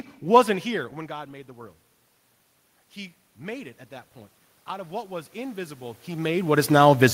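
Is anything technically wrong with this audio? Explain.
Yes. This speech clip has automatic gain rising twice. From 0.22 to 1.79 s, voice and room noise swell together by about 3 dB. The level at the microphone had fallen by about 19 dB as the talker moved back, so the automatic gain control judged the input too quiet and slowly raised its gain. It happens again from 4.68 s to the end, just after "it at that point," with the same gradual lift of voice and background together as the talker shifts around 6 s.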